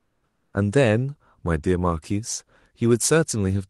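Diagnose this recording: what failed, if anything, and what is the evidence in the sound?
From 0 to 0.53 s the background is a steady, featureless hiss about 5 dB quieter: comfort noise in place of the background, likely from Opus discontinuous transmission.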